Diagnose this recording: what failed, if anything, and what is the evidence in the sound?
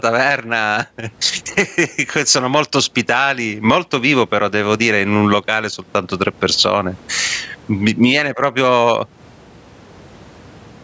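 Gain pumping runs through the whole recording. The level swings by roughly 20 dB. Loud and quiet passages sit unnaturally close together, so the sound comes across squashed. The likely cause is input gain set far too high at the microphone stage, with a fast limiter clamping each peak. On a waveform, the envelope looks flattened against a ceiling, and the noise floor rises in the gaps. A spectrogram shows the background brightening between phrases, all of it below the 8 kHz band limit of the call path.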